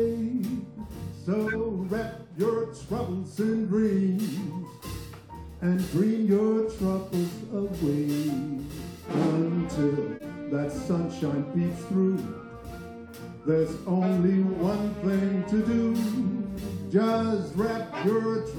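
At 1.47 to 1.55 s a short, fairly loud glitch bursts out, and at 10.13 to 10.25 s a quieter, slightly longer glitch follows. Both are corrupt frames decoded: damaged bits in compressed frames were played anyway, so misread gains and codes placed energy at wrong frequencies. The first fits a single frame, the second a few in a row. Unlike a dropout or concealed loss, the sound doesn't smear but gains energy at frequencies that don't belong.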